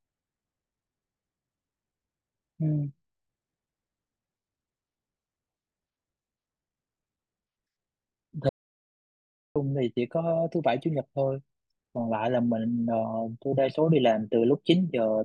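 From 8.49 to 9.56 s the speech cuts to silence with no room tone, an audio dropout to silence, likely a lost input feed.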